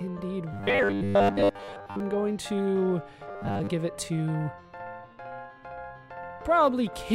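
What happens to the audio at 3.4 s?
Right there you get robotic sound from repeated short buffers, running from about 3.29 to 3.70 s. The audio turns into a stiff, metallic buzz pinned at 100 Hz, which means a slice of roughly 10 ms is being looped. For most of that stretch the real audio is being skipped, most likely because fresh data wasn't arriving often enough and the playback side kept recycling the last buffer to fill the gap.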